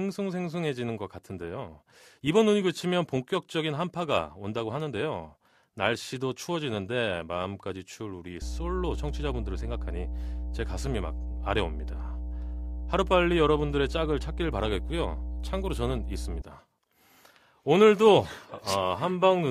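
From 8.42 s to 16.42 s, mains hum sits under the speech: a steady, pitched low tone at 60 Hz, loud enough to come close to the level of the talking. A ground loop or a nearby transformer is letting the power line leak into the signal path. Wind or handling rumble is broadband and drifts with movement. This tone holds one fixed pitch and never wavers.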